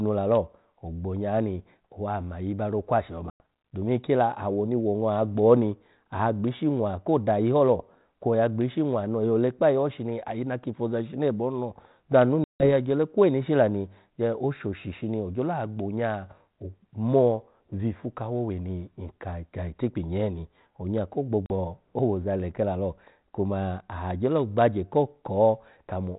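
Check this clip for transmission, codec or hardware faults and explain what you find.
There's packet loss on an ADPCM call, three times over, on what sounds like a G.726 line at around 32 kbit/s. The sound cuts to hard-edged silence after "owa mayi ro okwashi" at 3.3 s for 100 ms, after "ho lo bya anu" at 12.44 s for 160 ms before "ole kweni ishi la", and after "nyee in onya ko" at 21.46 s for 40 ms before "owoza leke la lo". The gaps likely span about 5, 7 and 2 lost packets. Because ADPCM sends only differences from a running prediction, the receiver's predictor and step size drift from the sender's, so the sound comes back slightly distorted before it settles.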